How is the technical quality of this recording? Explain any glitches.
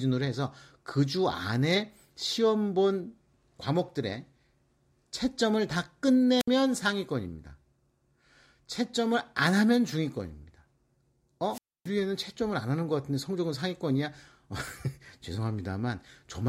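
The speech recording has two wireless microphone squelch dropouts. At 6.38–6.48 s (63 ms mute) and 11.50–11.89 s (277 ms mute), fading radio signal lets hiss rise before the receiver squelches the output. On a spectrogram that looks like a brief broadband haze, then a blank gap; the waveform flatlines before the speech returns.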